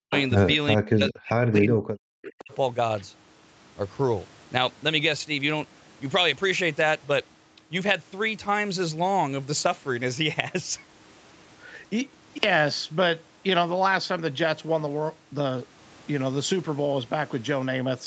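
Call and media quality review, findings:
Speech suppressed in double talk at 0.0–0.12 s, 0.77–1.9 s and 2.18–2.52 s. The level dips by up to about 40 dB and chops out while the far side talks over it. Likely the echo canceller can't tell near talker from loudspeaker echo and ducks both.

Echo leak at 0.15–0.23 s, about 10 dB under the speech, and at 2.39–2.54 s, fainter at about 25 dB down. It's a scrappy copy trailing by 425 ms. Likely the far end's loudspeaker echo slipping past its canceller and coming back. Nothing is audible above 8 kHz, consistent with a wideband Opus call path.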